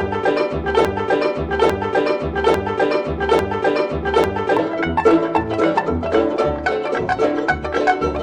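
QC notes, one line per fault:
0.85 to 4.57 s, broken-record loop: a chunk of the music about 0.85 s long plays four times back to back, identical each pass, so it stutters in place. Most likely the player or stream stalled and kept resending its last buffer, and the music meant for those seconds never arrives.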